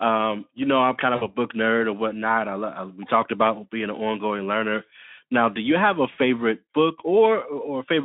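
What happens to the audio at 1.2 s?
At 1.2 s the speech briefly smears into a stretched, buzzy tone or coloured noise that fades, running from about 1.15 to 1.24 s and leaving the sound weak or distorted for a moment after. This is VoIP packet loss concealed by the speech codec: roughly 60 ms of audio went missing, which fits three 20 ms frames, and the decoder filled the gap by extending its last pitch and filter while lowering the gain, then needed a little time to recover once real packets returned.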